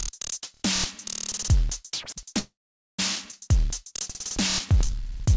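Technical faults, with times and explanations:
2.39–2.99 s, call audio freeze: the sound stops and a brief decaying fill gives way to about 0.47 s of silence, likely from packets held up until the jitter buffer ran empty. Nothing is lost; the audio resumes where it stopped, so 0.6 s of delay is inserted. On the waveform this appears as a flat gap after a short tapering tail.
3.31–3.34 s, skip ahead: playback jumps forward over roughly 0.3 s of audio, joined by only a 14 ms bridge. The material on either side abuts almost directly. The spectrogram shows an abrupt discontinuity, with textures changing instantly and no gap between them.
4.38–5.35 s, jitter buffer slow-down: the receiver repeated short pitch-period or pause fragments to rebuild its reserve. That adds 46 ms, so this stretch plays at 96% speed with unchanged pitch and slightly drawn-out sounds. The spectrogram shows horizontally stretched events with harmonics at the same frequencies.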